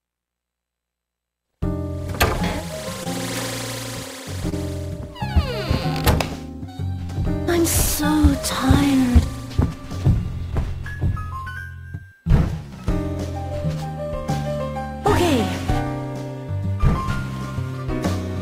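Around 3.03 to 3.07 s, 4.49 to 4.54 s and 7.04 to 7.10 s you get short concealed packet loss. Each time, a small chunk of audio (20 ms, 20 ms, then 40 ms) didn't arrive in time. The decoder patched the gap by carrying the preceding sound forward and then easing back into the real signal. Each one comes across as a quick smear or wobble, with the one at 7.04 s lasting a touch longer.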